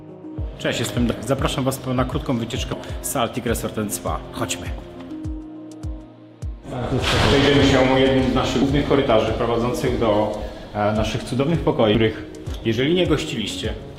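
At 11.95 s the audio jumps forward, skipping roughly a third of a second of sound with no gap of silence. This is most likely a dropped buffer (overrun), where incoming samples were overwritten before being read, splicing the two sides together.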